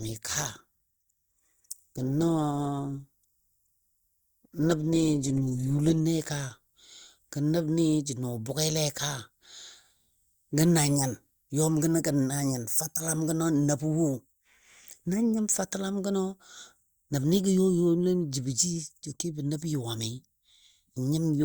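For the first 6.0 s the speech is in the adaptive stream's low starting bitrate: dull, smeared treble and heavier codec artefacts, roughly what you'd get from 16 kbit/s Opus. At 6.0 s the player steps up, closer to 64 kbit/s, and the top end snaps back with no gap.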